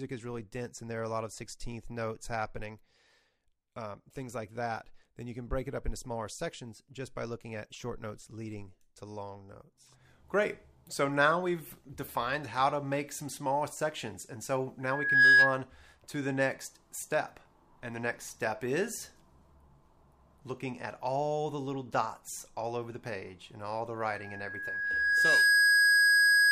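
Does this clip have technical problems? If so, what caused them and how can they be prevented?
Yes. Loudspeaker feedback squeal at 14.83–15.62 s and from 24.14 s to the end: a microphone re-amplifies its own loudspeaker, so a 1.7 kHz tone builds until it stands well above the sound. Keep microphones away from and behind loudspeakers, lower the gain, or notch 1.7 kHz.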